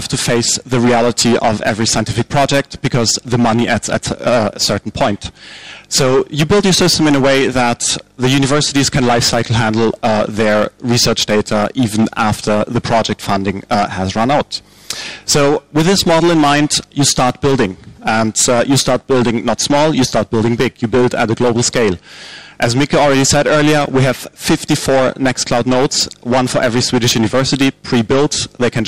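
Hard clipping runs through the whole clip. The audio was driven about 13 dB past what some stage could pass, so every peak is sliced off flat, and roughly one sample in seven sits pinned at the clipping limit. Loud passages sound harsh and fuzzy rather than just crackling. On a waveform the tops and bottoms appear as flat plateaus. A spectrogram shows bright vertical smears of harmonics reaching high up the spectrum wherever the level peaks.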